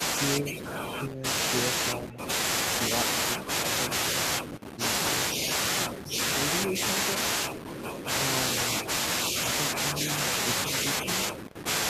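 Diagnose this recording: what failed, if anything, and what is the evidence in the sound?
Echo leak in call processing: faint delayed copies at 2.1–2.18 s (313 ms lag, about 20 dB down) and 11.49–11.55 s (291 ms, about 30 dB down), likely uncancelled loudspeaker echo.

Speech suppressed in double talk in call processing: level dips about 5 dB for roughly 150 ms within 4.49–4.76 s, likely the echo canceller attenuating overlapping talk.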